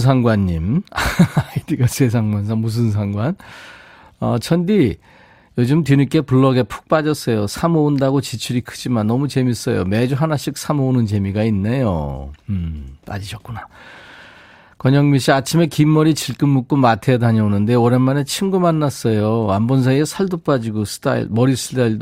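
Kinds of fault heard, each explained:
No technical fault can be heard anywhere in the speech. There is nothing here to list or explain.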